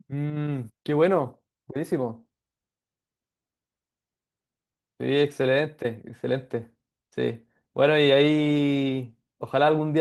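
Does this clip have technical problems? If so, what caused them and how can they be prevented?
No, the speech carries no technical faults; it has passed through Opus voice compression at about 20 kbps in hybrid fullband mode, and that coding leaves only a light mark on the sound.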